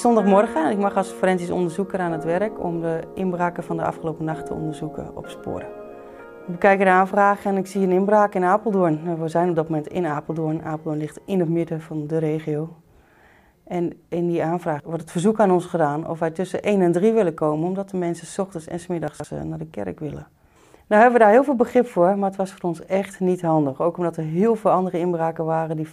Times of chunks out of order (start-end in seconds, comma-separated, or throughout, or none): 19.08-19.24